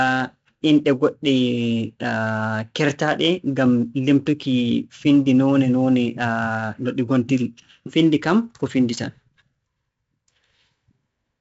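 A gritty hiss rides on the speech from start to finish, swelling with every loud syllable and roughening sharp consonant onsets, while everything above about 7.7 kHz is missing, so the sound is dull. This is 4-bit ADPCM compression, and the damage is heavy. Each sample is coded as a coarse step from a prediction, and the quantising error tracks the signal's level. The 64 kbps rate and the missing top end fit a 16 kHz sample rate.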